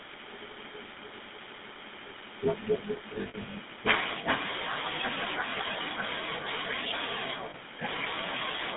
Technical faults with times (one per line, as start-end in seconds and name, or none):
0.00-8.76 GSM full-rate codec
3.14-3.55 lost GSM frames
7.50-7.55 lost GSM frames